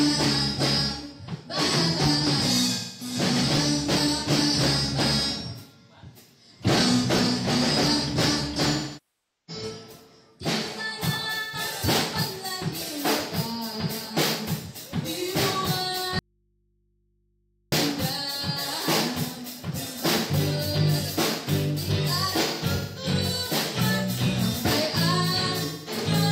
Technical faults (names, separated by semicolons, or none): AAC frame loss with concealment; audio dropout to a faint residue